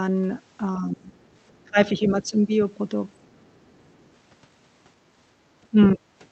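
Speech suppressed in double talk, 0.79 to 1.17 s: the talker dips by about 25 dB, likely because the echo canceller mistook overlapping talk for loudspeaker echo and turned everything down. Other side's voice leaking through, 1.23 to 1.68 s: a faint second voice, about 40 dB below the speech, likely survives incomplete echo removal. Speech suppressed in double talk returns from 1.64 to 2.51 s with drops of about 20 dB, during which the other side's voice leaking through briefly surfaces at 2.24 s. Speech suppressed in double talk again cuts the speech by about 30 dB from 3.21 to 3.52 s, followed by the other side's voice leaking through from 3.56 to 4.09 s, again about 40 dB down. Speech suppressed in double talk at 5.71 s is a brief dip of about 15 dB. The other side's voice leaking through from 5.81 to 5.88 s is much stronger, only about 10 dB below the speech.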